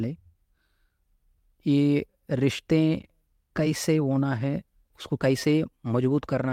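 No technical faults occur at any point in the speech.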